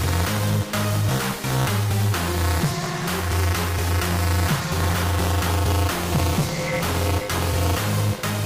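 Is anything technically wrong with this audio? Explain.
Yes. Buffer tearing runs throughout the clip. The writing side and the reading side of the playback ring buffer have drifted so that they cross inside every period. About a tenth of each buffer therefore carries audio from roughly 20 ms earlier, with an abrupt splice at both edges. Those splices repeat at 200 Hz, which points to a 5 ms buffer period, and they produce a constant robotic buzz that follows the sound and disappears in silence.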